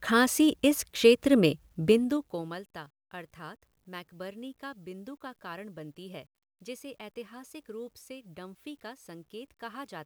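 From 1.82 to 2.67 s, just after "खाँसी इस क्षेत्र में", zipper noise: the speech drops about 20 dB in unsmoothed 2 dB steps, around fifteen a second, each ticking faintly. The waveform envelope descends in stairs; the spectrogram shows thin vertical broadband lines at each step.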